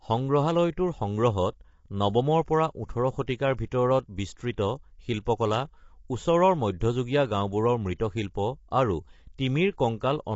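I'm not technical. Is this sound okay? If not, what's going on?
No. Throughout, the speech sounds rough and grainy, with nothing above about 7.7 kHz. That's likely low-delay AAC compression, the kind video calls use.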